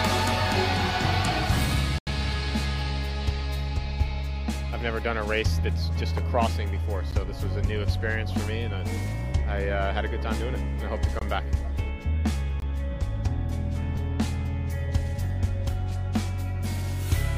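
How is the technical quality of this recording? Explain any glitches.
The recording has two kinds of glitch: four dropouts to pure digital silence and one brief Bluetooth frame loss, with light codec compression faintly present throughout.

Block of digital silence, at 1.98 to 2.07 s (about 85 ms), 7.11 s (about 14 ms), 11.19 to 11.21 s and 12.60 to 12.62 s (about 21 ms each): the playback chain likely failed to fill its output buffer in time, so whole blocks of samples became zeros. The longest gap fits a 4096-sample buffer and the two 21 ms gaps fit 1024 samples. The sound stops abruptly and restarts with no fade. The 7.11 s gap is heard as a tick, the others as short holes.

Lost LE Audio frames, at 13.96 s: the LE Audio link dropped audio for about 10 ms, which fits a single lost frame. The LC3 decoder filled the gap by reusing the previous spectrum with randomised phase, so the sound briefly smears into a grainy, noisy blur before clean audio resumes.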